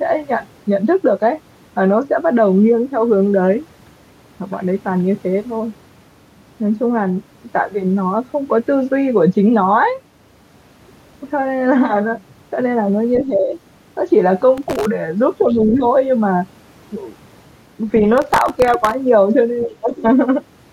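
A speech recording with three kinds of fault in its last seconds. There is speech suppressed in double talk at 13.26–13.55 s, 15.44–15.85 s and 19.66–20.04 s. The voice dips by about 10 dB in the first two and about 25 dB in the last. This is likely an echo canceller ducking the talker while the far side also speaks. Processor overload crackle appears at 14.58–14.85 s and 18.18–18.94 s. It is a gritty tearing made of dozens of hard-edged skips, each repeating a scrap of old audio. The skip size fits a very short buffer, under a millisecond. The other side's voice leaking through is heard at 15.41–15.73 s, about 20 dB below the talker, and briefly at 19.61–19.67 s, about 25 dB below. It likely comes from loudspeaker echo the canceller left in the microphone signal.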